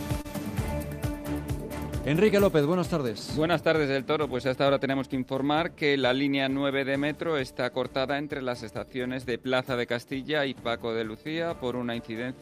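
At 0.21 s, just after the start, a short stall from a late packet holds the sound for about 30 ms until 0.26 s. One packet had not arrived when it was due, so the jitter buffer ran dry and the receiver stretched the last bit of audio to fill the gap, then resumed exactly where it had stopped. Nothing is lost; the sound simply hangs for an instant with a faint buzz or dip. Unlike a dropout, there is no hole or jump forward.

Behind the rest of the clip is clock drift between sender and receiver. The sender's clock runs roughly 2 percent slow relative to the receiver's, so the jitter buffer keeps draining. The receiver cannot hold a steady fill level, and small timing hiccups appear at irregular intervals rather than as a single event. What separates this from a one-off late packet is that the disturbance persists, always leaning the same way, instead of recovering and staying clean.

From 0.75 s to 12.35 s the receiver answers that drift with repeated timing corrections. 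Playback effectively runs at 98 percent speed, with short pieces repeated unevenly throughout to pad out the slow supply, adding up to roughly a third of a second by the end. Each repeat is tiny, heard as a slight stutter or a faintly unsteady pace. Isolated glitches sound random; these all lengthen the audio and recur across the whole stretch.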